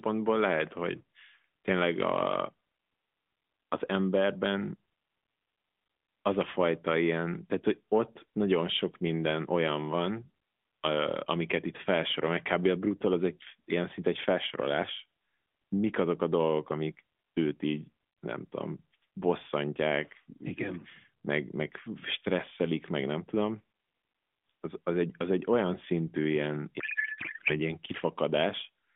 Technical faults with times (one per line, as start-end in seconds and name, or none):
26.80-27.58 codec payload misread